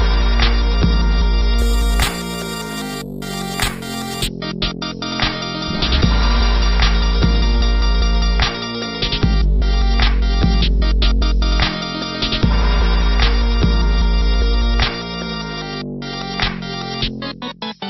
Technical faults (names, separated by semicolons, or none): imaging from sample-and-hold upsampling